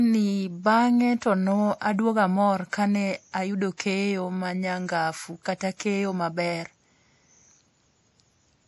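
Throughout, the speech has likely gone through MP3 compression at a low bitrate, around 48 kbps. Starved of bits, the encoder drops everything above 11.5 kHz and zeroes weak frequency lines, so the audio sounds dull and plainly watery, with swirly, chirpy sibilants.

From 3.77 to 3.80 s there is pre-echo. A sharp attack landed late in a transform block, and quantisation noise sized for it spread backwards about 26 ms into the quiet moment before. A brief hiss leads into the onset, which sounds softened and smeared.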